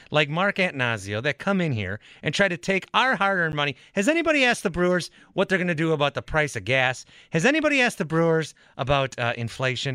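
At 3.52 s the program likely failed to fill its output buffer in time, leaving a 10 ms block of digital silence, heard as a tick or dip.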